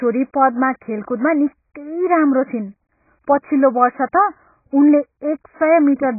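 From start to finish the speech is cut off sharply at about 2.5 kHz, with nothing above it, and what remains sounds dull, smeared and warbly, with gaps in the spectrum and a fizzy edge on sibilants. This is likely heavy AAC compression, consistent with AAC-LC at a very low bitrate around 12 kbps. A simple low-pass filter would leave the remaining band clean; here the coder has also starved that band, so it swims and bubbles.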